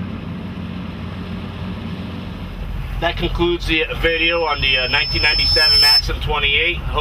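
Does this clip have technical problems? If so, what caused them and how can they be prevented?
Yes. A loudspeaker feedback squeal runs from 4.07 to 6.03 s. A single tone near 5.3 kHz swells over about two seconds to roughly 10 dB above the sound. The microphone hears its own loudspeaker, and the loop gain exceeds one there. Lower the gain, move the microphone away from the loudspeaker, or notch that frequency.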